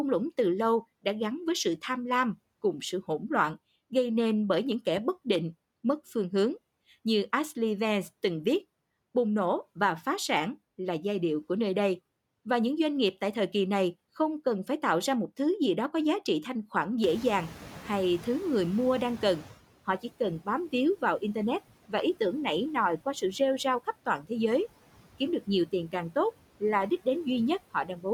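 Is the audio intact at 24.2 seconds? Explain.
No. From 24.06 to 24.31 s, just after "sự rêu rao khắp", there is speech cut by the noise suppressor. The suppressor mistook part of the speech for background noise and turned it down with the noise. The deepest drop is about 12 dB, and roughly a tenth of a second of sound is affected within that span. Those fragments sound swallowed and faint, as if the speech briefly dips away.

Noise suppressor artifacts also run through the whole clip, including this moment. The suppressor pulls down every band it judges to be steady noise, frame by frame, by about 17 dB. The background therefore sinks in the pauses and comes back under the speech.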